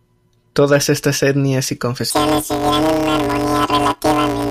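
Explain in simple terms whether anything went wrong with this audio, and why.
Something does go wrong, from about 2.10 s right through to the end at 4.50 s. The speech turns into a robotic buzz, pulsing at roughly 172 times a second, with no obvious jump in pitch. That's planar audio read as interleaved: the player expects left and right samples to alternate, but the audio actually stores them in separate chunks. The chunks here are tiny, about 5.8 ms each, which fits a 256-sample block, so the mix-up comes through as buzz rather than a higher pitch.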